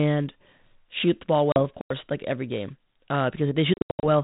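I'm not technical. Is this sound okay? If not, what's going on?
No. There are two kinds of fault in this speech clip.

The first is packet loss on an ADPCM call. Small pieces of the call's data never arrived and were filled with silence. Because each piece depends on the one before it, the receiving end lost track of where the sound should be. At 1.52 to 1.63 s, just after "shoot the ball", about 40 ms went missing. You hear an abrupt gap, then speech returning slightly distorted before it settles. Much worse is 3.74 to 4.06 s, where around thirty pieces, about 250 ms in total, dropped out in bursts over 290 ms, the longest gap 80 ms.

The second is a block of digital silence. The program feeding the sound out most likely didn't deliver one chunk in time, so that chunk played as pure nothing. It runs from 1.81 to 1.90 s, about 93 ms, which fits a 4096-sample buffer, and ends just before "like every game". 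The sound snaps off and back on with no fade around a short, dead hole.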